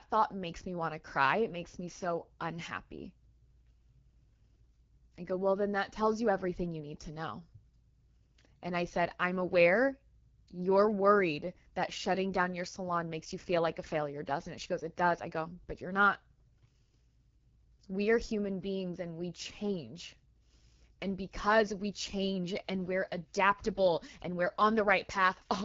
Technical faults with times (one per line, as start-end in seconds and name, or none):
0.00-25.65 AMR wideband (HD Voice) codec